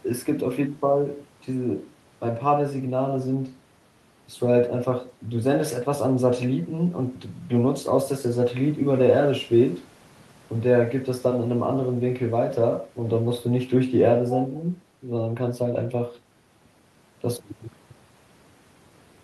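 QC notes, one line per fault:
No fault found, so there is no line per fault to give.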